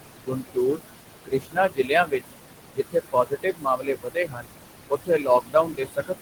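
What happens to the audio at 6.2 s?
The speech is cut by the noise suppressor from 4.9 s to the end. It mistakes the quiet speech for noise and turns it down by up to about 20 dB, so it sounds swallowed and faint. Noise suppressor artifacts are also present. The room noise, only about 7 dB below the speech, is pushed down by about 20 dB between sounds.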